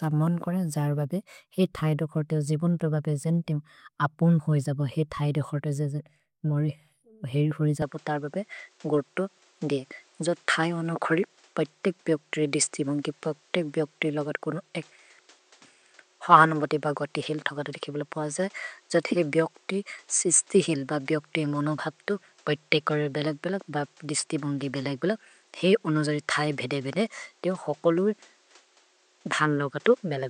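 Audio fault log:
7.82–30.29 s: input likely switched to a poorer device. From 7.82 s the sound turns duller, with nothing above about 9.1 kHz, and a fresh background noise appears roughly 35 dB under the signal. There is no gap at the change and no noticeable level jump.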